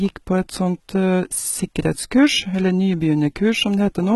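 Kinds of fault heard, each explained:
HE-AAC compression: The speech has a hard ceiling at 11.8 kHz, and the treble below that sounds synthetic rather than recorded, with s sounds coming out gritty and a bit lispy. That's likely spectral band replication, where the codec keeps only the lower spectrum and fakes the top by copying lower bands upward under a rough envelope, so the harmonics don't line up. The damage is heavy, which fits a very low bitrate of around 16 kbps.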